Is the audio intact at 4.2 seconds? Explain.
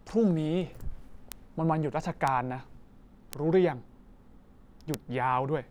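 Yes, the speech at 4.2 seconds is intact, with no dropout, click, distortion or other fault at that moment.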